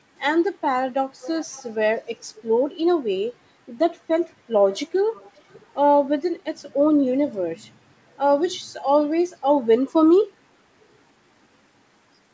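Speech with an echo leak. A faint, delayed copy of the voice trails about 0.47 s behind, at 1.2 to 1.7 s, 2.36 to 2.42 s and 5.13 to 5.73 s. It sits roughly 20 to 30 dB down. The likely cause is a loudspeaker-side echo canceller returning leftover pickup.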